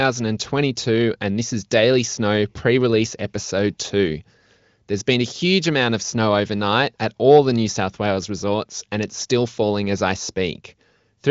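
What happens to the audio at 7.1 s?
Nothing goes wrong at 7.1 s: the speech there comes through intact, carried by the AMR wideband (HD Voice) codec at 23.05 kbit/s, with nothing above about 7.4 kHz.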